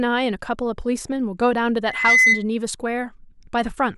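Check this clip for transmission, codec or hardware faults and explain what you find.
One fault is present: a loudspeaker feedback squeal in this speech clip. It runs from 1.84 s to 2.44 s. A single tone at 2 kHz swells over roughly a third of a second. It settles around 10 dB louder than the speech. The microphone is picking up the loudspeaker it feeds. At 2 kHz the loop gain exceeds one. That tone reinforces itself on each pass until the loop is broken.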